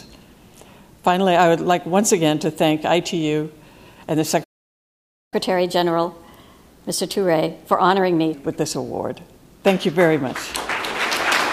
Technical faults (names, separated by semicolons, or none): playback stall; catch-up at higher speed